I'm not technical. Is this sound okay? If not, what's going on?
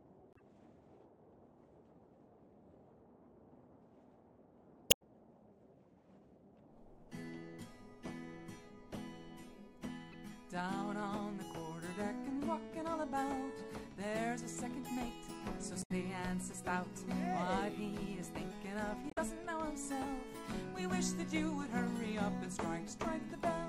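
No. Damaged data in a compressed stream: parts of the file were corrupted, so playback briefly loses its place and produces short chirps or blips at 0.33–0.41, 4.87–5.02, 10.12–10.14, 15.79–15.91 and 19.08–19.18 seconds.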